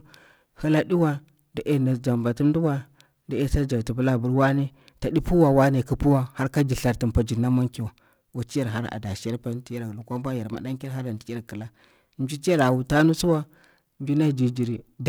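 A rough, metallic edge clings to the speech for the whole clip and drops away in the pauses. This is periodic clock jitter: the converter's clock wobbles at around 1 kHz, spraying sidebands either side of every component, most strongly on the higher frequencies.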